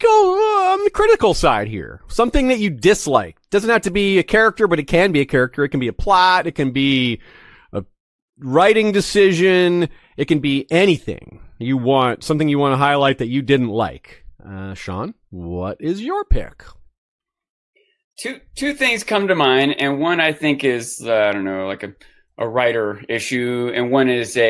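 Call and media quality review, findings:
No call or media quality issues found in the review of this speech recording.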